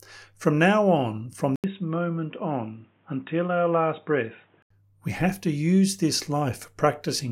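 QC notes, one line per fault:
1.56–4.70 s, input switched to a poorer device. An 80 ms gap marks the switch. The sound then turns dull and boxy, with nothing above 3.8 kHz. It drops about 5 dB and carries faint new background noise. A narrower-band microphone likely took over.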